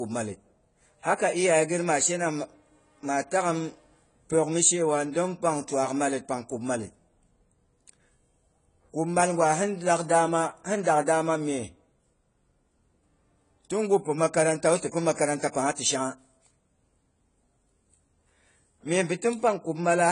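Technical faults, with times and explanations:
Throughout, AAC compression: nothing above 10 kHz, with smeared, fizzy sibilants that set it apart from simple low-pass filtering, likely AAC-LC near 24 kbps.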